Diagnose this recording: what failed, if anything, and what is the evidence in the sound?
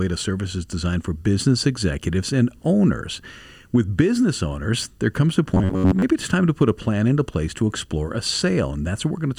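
The failure is at the driver or buffer stage. From 5.54 to 6.02 s the speech turns into a rigid, metallic buzz, heard as robotic sound from repeated short buffers. The buzz sits at about 93.8 Hz. That is a repeat period near 10.7 ms. Most of that half second is repeated material, not fresh audio. The likely cause is audio arriving too seldom, so the software loops the last short block. The skipped audio is lost. The fixed loop length sets the buzz rate, while the sound still roughly follows the speech.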